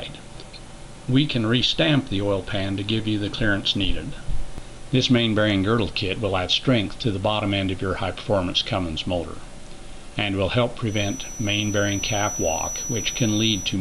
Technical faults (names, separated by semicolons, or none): feedback whistle